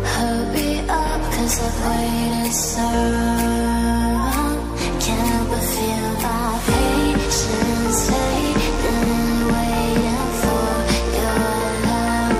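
At 7.22 s, sharp switching spikes from the 50 Hz mains supply start leaking into the signal path, arriving twice per cycle, so at a 100 Hz rate, and running through to the end of the clip at 12.40 s. Because each spike is so abrupt, it spreads harmonics of 50 Hz up into several kHz. The result is mains buzz: a steady, raspy, edgy drone sitting roughly 20 dB below the wanted sound.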